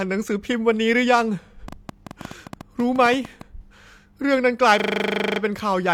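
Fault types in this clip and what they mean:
Train of clicks: From 1.68 to 3.42 s, sharp, similar-shaped ticks pop over the speech at an uneven pace of about 9 per second, around fifteen in all, peaking about 5 dB above the speech. Likely interference from nearby equipment or a faulty connection.
System hang loop: From 4.8 to 5.4 s, the speech turns into a rough, rapid buzzing stutter as one 40 ms fragment repeats exactly 15 times, a 25 Hz loop. The computer or driver froze while the hardware kept cycling the same buffer.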